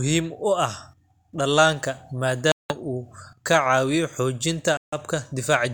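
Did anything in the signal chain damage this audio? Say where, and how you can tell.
Yes. The sound cuts out twice, from 2.52 to 2.74 s and from 4.77 to 4.96 s, and each time the speech resumes further along, as if it had continued underneath. That points to the wireless playback link, most likely a Bluetooth dropout: packets arrived too late for the headphones and were discarded, leaving silence until valid data returned. On a waveform each gap is a flat line. A spectrogram shows a clean vertical band of silence across all frequencies.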